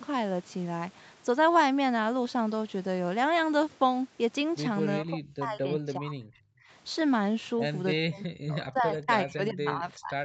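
From 5.0 to 6.5 s the speech sinks hard, by about 35 dB at its deepest, dipping, losing its high end or cutting out in pieces. The same thing happens again from 8.0 s to the end. This sounds like speech suppressed in double talk, likely the echo canceller failing to tell the near talker apart from loudspeaker echo while both sides were talking, so it clamped down on everything. Under all of this, the call path's Opus codec cuts the audio off above 8 kHz.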